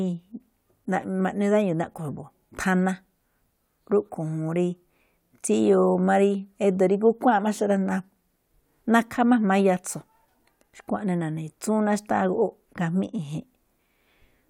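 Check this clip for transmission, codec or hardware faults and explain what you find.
No transmission, codec or hardware faults turn up anywhere in this clip.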